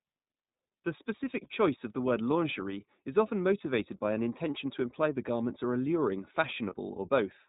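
Throughout, the speech carries plainly audible iLBC codec damage: a slightly rough, synthetic quality, with the spectrogram showing nothing above 4 kHz, which fits the 15.2 kbps, 20 ms mode. From 1.44 to 1.48 s, just before "choice of the word", a lost iLBC frame is concealed by repeating the last pitch cycle with noise, giving a brief buzzy held vowel. On a spectrogram it shows as smeared, repeated harmonics, and the gap fits one missing 20 ms frame. The same happens from 6.70 to 6.74 s, right after "the garments are alluring", with a short breathy hold before the sound recovers almost immediately.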